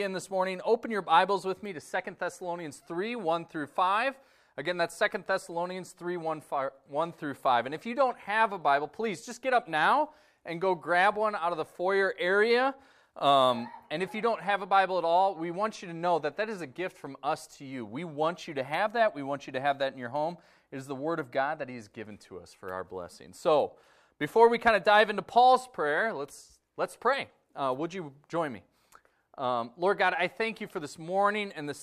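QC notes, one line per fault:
No faults were heard in this recording.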